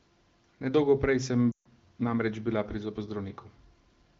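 From 1.52 to 1.68 s, just before "namreč bila", a run of lost AMR speech frames breaks the audio. A string of frames failed their checksum, a gap that fits about seven 20 ms frames, so the AMR-WB decoder repeated the last good pitch and spectral shape with falling gain. The sound drops quickly to near silence, then returns briefly weak. On a spectrogram, harmonics flatten into horizontal streaks and dim to blank; the waveform envelope tapers to near silence.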